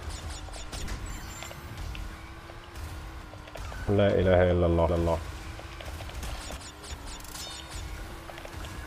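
Repeated buffer at 0.85 s: new audio failed to reach the output in time, so the device replayed the last block it held three extra times instead of waiting. Each block lasts about 5 ms, which points to a very small playback buffer, and roughly 15 ms of fresh audio is lost in the process. Because each repeat is so short and butts against the next with a hard join, the result is a quick click or tiny buzz rather than an audible stutter.

Doubled audio track from 4.89 to 6.57 s: a second full-band copy of the sound runs alongside the original, trailing it by about a third of a second at roughly equal loudness. The cause is likely a slower second capture path or an edit that left two copies overlapping out of step. The copy carries no decay or room colour, so it reads as a flat, distinct repeat. It switches in and out abruptly at both ends of the span.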